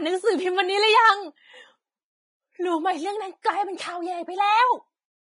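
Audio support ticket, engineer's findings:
Throughout: grainy, hissy treble on the speech, roughened tones, blurred attacks, nothing above 10.6 kHz. Likely Vorbis compression, heavy damage, fits a bitrate near 23 kbps. Coarse residue quantisation turns fine detail into noise. Unlike steady background hiss, this grain follows the signal.

3.42–3.45 s: short hiss just ahead of a sharp attack, spread over 28 ms, onset soft and smeared. Pre-echo from the transform codec: block-wide quantisation noise fills the quiet before the transient. Unlike a click or dropout, it leads the attack.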